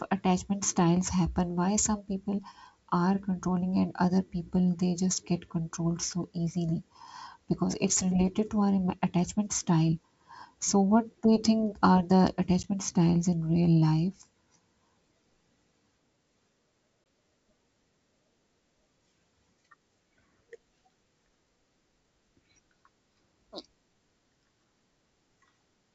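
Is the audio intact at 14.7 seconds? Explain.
Yes, the audio is intact at 14.7 seconds, with no fault at that moment.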